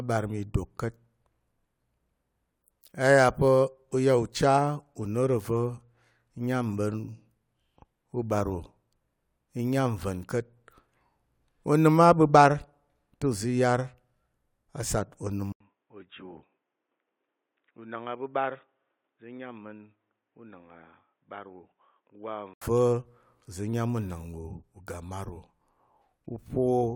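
At 15.52 s, right after "a sat onəm", the input likely switched to a poorer device. After an 80 ms gap the speech loses everything above 3.8 kHz and sounds dull and boxy. It is also quieter by roughly 10 dB, with faint new background noise, until 22.62 s.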